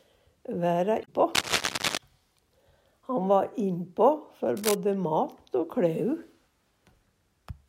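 From 1.01 to 1.09 s, damaged data in a compressed stream makes the decoder misread frames and resync, giving a brief broken disruption rather than added noise. Cable scratch noise follows at 1.35 to 1.97 s, roughly as loud as the sound, and again at 4.57 to 4.75 s, somewhat quieter. The dense, uneven rustling bursts sit over the sound instead of replacing it, and likely come from a worn cable or connector being moved.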